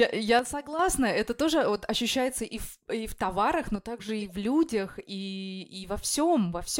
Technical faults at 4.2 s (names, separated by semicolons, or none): corrupt frame decoded